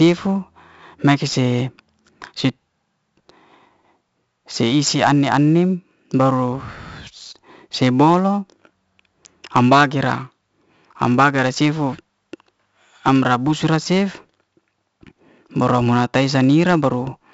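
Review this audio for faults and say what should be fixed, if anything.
Throughout the speech, 4-bit ADPCM compression adds a gritty hiss that rises and falls with the voice, and sharp attacks break up where the adaptive step size lags behind sudden jumps. The 64 kbps rate fits 4-bit samples at a 16 kHz sample rate, and nothing reaches above 7.7 kHz. On a spectrogram, there is a hard ceiling at 7.7 kHz and a broadband noise wash under loud syllables. Keep the master as uncompressed PCM or use a modern codec.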